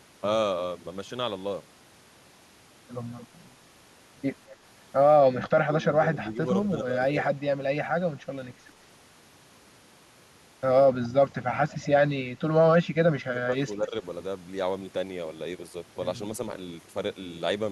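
Speech in which the talker repeatedly dips or drops out: briefly and slightly at 4.5 s, deeply from 5.3 to 6.4 s, faintly from 6.78 to 7.0 s, then cut hard from 12.82 to 13.58 s and dipping again from 13.75 to 13.95 s, with the worst losses around 25 to 30 dB. This is likely speech suppressed in double talk, where an echo canceller confused the talker with loudspeaker echo and attenuated both. Faint, short echoes about 220 ms behind the speech also surface at 6.65, 11.03 and 11.69 s, roughly 25 to 30 dB below the voice. These are likely echo leak, with a far-end canceller letting scraps of its loudspeaker pickup return down the line.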